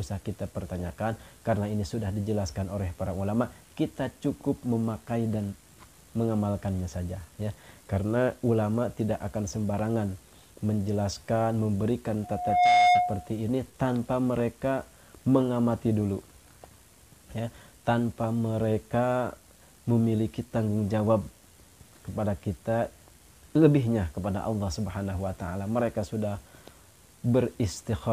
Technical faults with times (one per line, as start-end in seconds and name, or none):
12.23-13.32 loudspeaker feedback squeal